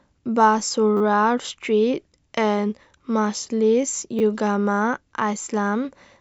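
Repeated buffer at 0.97 to 1.01 s and again at 4.19 to 4.21 s: fresh audio arrived late, so the last short block of speech was replayed, four extra times then twice, fitting a 10 ms buffer. Each sounds like a brief buzzy stutter with hard joins, and no speech is lost.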